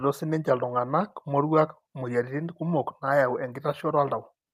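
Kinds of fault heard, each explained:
No faults turn up in this bit of speech; nothing in it catches the ear as a technical problem.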